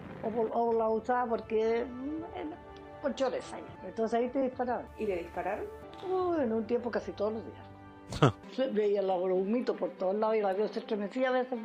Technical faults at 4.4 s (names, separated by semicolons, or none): short concealed packet loss